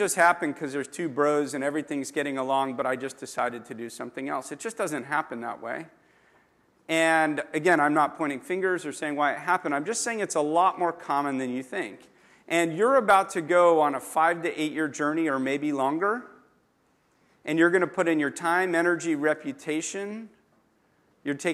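Nothing here trips the ear at any point, so there's no technical fault to describe in this audio.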